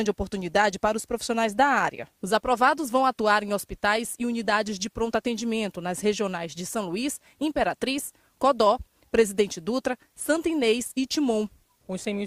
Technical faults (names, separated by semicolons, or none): none